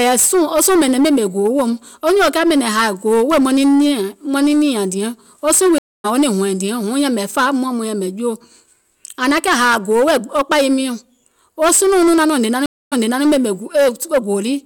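From start to end, the speech is driven about 16 dB past what a stage in the chain can pass, so roughly a tenth of the samples are cut flat. This is hard clipping. The squared-off peaks add harmonics high in the spectrum, and with overload this large every loud syllable carries a harsh fuzz rather than occasional crackle.

At 5.78 s, right after "diɛŋ wo suùŋ", there is a stream reconnect. The connection dropped, and the player went quiet for about 0.26 s before starting a fresh decoder. Playback picks up at "wo niŋ hɔ̀ɛ̀ŋ diɛŋ" around 6.06 s, about 0.2 s further on than where it broke off, so a short stretch of speech is skipped.

A second stream reconnect begins at 12.66 s. After another silence of about 0.26 s, the audio resumes 325 ms earlier than the break, as happens when the server resends a burst. The speech just before the dropout is heard twice, and the fault ends at 13.24 s.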